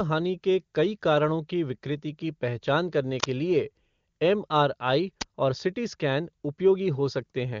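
A speech clip marred by two short, harsh digital glitches, at 3.2 to 3.24 s just after "विकृति की पहचान करने" and at 5.21 s just before "और सीटी स्कैन". Both come from an uninitialised buffer, with leftover memory played out as samples before real audio filled it.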